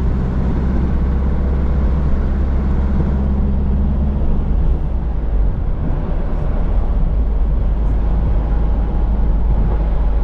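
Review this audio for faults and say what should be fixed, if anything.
A fast, faint ticking runs from 0.12 s to 10.22 s, repeating about every 20 ms, so it blurs into a soft rattle that stands out most on loud, sustained sound. These are clock slip clicks, likely caused by two unsynchronised devices whose clocks differ by around 1000 ppm. Each time that drift adds up to a whole sample, one sample is dropped or repeated. To prevent it, lock both devices to a single shared clock, or pass the stream through an asynchronous resampler that tracks the drift.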